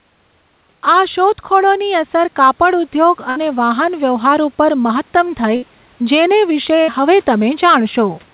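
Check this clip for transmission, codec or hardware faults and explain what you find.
Two faults stand out: level pumping that runs through the whole recording, and three short packet-loss dropouts.

Throughout, the level pumps up and down with the talker, with a level swing of around 10 dB, so loud and soft parts sit closer together and the speech sounds squashed and breathing. The likely cause is gain pumping: the input gain is set far too high, and a fast limiter or compressor keeps clamping it down on each loud moment.

At 3.30 s, 5.56 s and 6.82 s there is a burst of packet loss. Each time, the sound freezes into a brief held buzz or fading hiss for about 60 ms, then jumps ahead, with roughly 60 ms of speech skipped. The receiver stretched and faded out the last audio it had to cover the late or lost packets.

The call path's band limit, with nothing above 4 kHz, fits a G.711 telephone codec.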